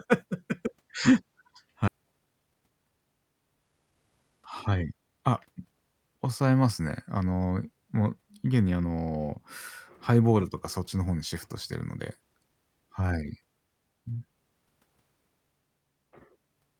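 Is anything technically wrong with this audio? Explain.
Yes, there are three faults in this speech. At 1.87 to 1.89 s, a skip ahead drops about a second of audio. The stream jumps forward, joining both sides with no gap. Then come two jitter buffer speed-ups, at 1.97 to 2.92 s and 3.72 to 5.09 s. The receiver trims pitch periods to shed excess buffered delay. Speech runs 14% and 15% fast at unchanged pitch and sounds hurried.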